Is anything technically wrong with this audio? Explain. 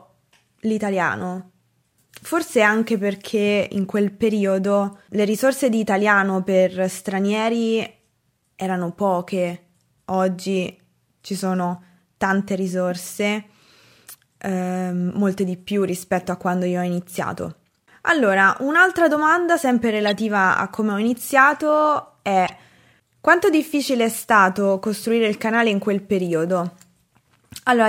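Yes. The speech has two stretches of corrupt frames decoded. They are at 20.01–20.11 s, between "un'altra domanda sempre" and "a come ho", and at 22.46–22.50 s. Damaged bits made the decoder misplace energy across a few frames, which produces short, fairly loud glitches such as a chirp, squeak, blip or burst of noise.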